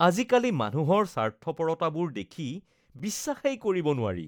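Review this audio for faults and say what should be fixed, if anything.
Gap at a join of encoded pieces, at 2.99 s: the speech drops into a gap of about 7.4 ms with edges smeared by the codec, then resumes exactly where it stopped. The audio was encoded in separate pieces, and a new piece appears to start every 4 s. Each encoder run left its start-up delay and final-frame padding in place, and splicing the pieces untrimmed leaves that silence in continuous sound. To prevent it, encode the whole programme in one pass, or trim each piece's encoder delay and padding using gapless metadata before joining.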